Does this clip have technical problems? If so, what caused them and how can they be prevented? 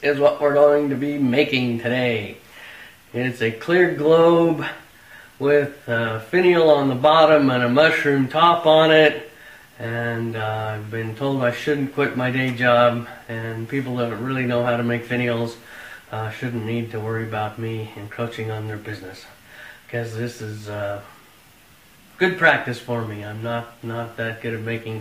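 No, this clip has no technical problems, so there is nothing to prevent.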